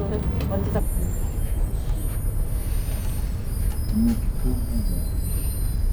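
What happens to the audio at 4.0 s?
A stereo read as mono fault is running at 4.0 s, part of a span from about 0.80 s to the end of the clip. The left and right samples, which alternate in the stream, are being played back one after another as a single channel. Each moment of sound therefore lasts twice as long, so the audio moves at half speed and sits an octave low, 12 semitones down. A fainter mirrored copy also appears in the upper half of the spectrum.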